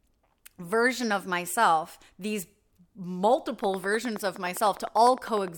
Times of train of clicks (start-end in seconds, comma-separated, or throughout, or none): 3.64-5.49